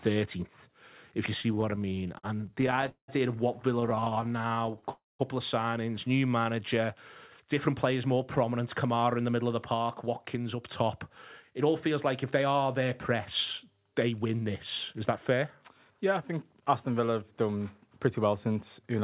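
Narrowband call audio with nothing above 4 kHz, which points to a G.711-style codec, shows repeated stalls (stutter) from 1.42 to 3.1 s and 3.8 to 4.89 s: the jitter buffer kept running dry and the last sound was stretched, with the longest fill at 189 ms. On a spectrogram these appear as smeared, repeated slices. A call audio freeze from 4.91 to 5.21 s adds about 0.28 s of held, fading sound ending in a silent stretch of about 0.19 s, visible as a flat waveform gap, likely caused by packets held up in transit. Jitter buffer speed-up then trims pitch-period chunks from 7.68 to 10.83 s at 106 % speed and from 11.51 to 16.99 s at 105 %, removing roughly 0.2 s and 0.3 s. The result sounds hurried at unchanged pitch, with harmonics staying level while events crowd closer together in time.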